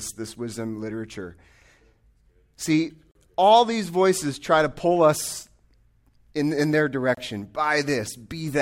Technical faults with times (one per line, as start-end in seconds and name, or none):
3.11-3.15 gap between stream segments
7.15-7.17 gap between stream segments